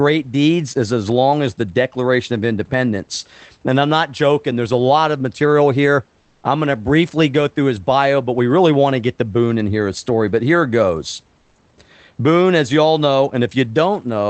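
At 6.21 s the real room background drops out for about 220 ms and a smooth, featureless hiss sits in its place, about 3 dB quieter, and the same thing happens again at 11.41 s for about 140 ms. That's comfort noise in place of the background, likely from Opus DTX: the sender goes quiet in pauses and the receiver fakes a bed of noise, so the faint texture of the room, about 43 dB below the loudest parts, briefly turns flat.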